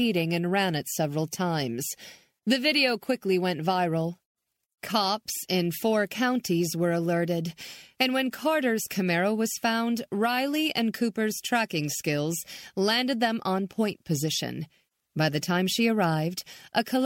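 A speech recording with no technical faults to report.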